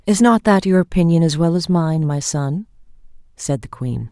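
No technical faults can be heard anywhere in this short speech recording, and the signal stays continuous and intact throughout.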